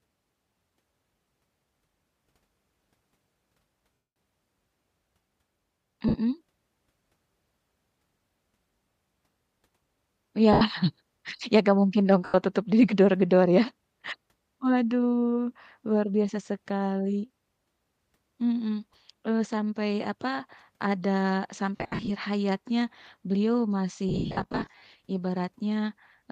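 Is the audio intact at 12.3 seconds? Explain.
No, there's a gap there. Right after "enggak mungkin dong" and before "tutup di", from about 12.25 to 12.34 s, you get roughly 90 ms of lost LE Audio frames, which fits nine 10 ms frames dropping out. The decoder papers over the hole by replaying the last good spectrum with scrambled signs and easing it down, so the speech turns into a short, noisy, hissy smear that dips toward quiet before the audio resumes.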